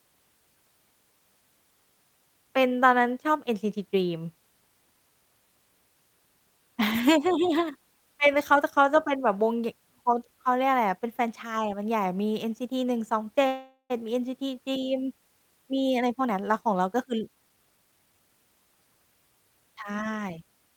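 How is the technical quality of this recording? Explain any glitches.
The recording has two glitches, both in its later part.

A call audio freeze at 13.47 to 13.92 s is likely caused by delayed packets draining the jitter buffer. The last sound stretches into a fading buzz, ending in about 80 ms of silence, then resumes intact.

A jitter buffer speed-up from 16.0 to 18.36 s trims short pitch-period slices to shed backlog, removing about 0.4 s. The speech runs at 118% speed, hurried but at normal pitch.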